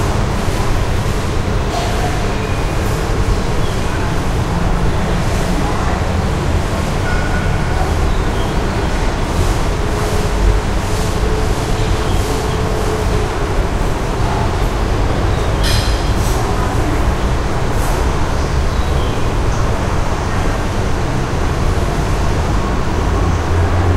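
No technical fault can be heard anywhere in this recording of sounds. There is no moment in it where anything goes wrong.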